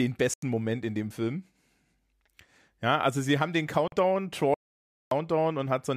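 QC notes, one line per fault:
0.34–0.43 s and 3.88–3.92 s, Bluetooth dropout: the speech cuts to silence for about 87 ms, then for about 44 ms right after "also sie haben den". Each time it resumes as though it had kept playing. The likely cause is late packets discarded before reaching the headphones, with gap lengths that fit roughly six and three lost packets.
4.54–5.11 s, audio dropout to silence: the speech stops mid-flow into about 0.57 s of silence with no room tone underneath, then comes back partway on. The likely cause is an input link that failed briefly while the recorder went on writing silence, so that stretch is lost.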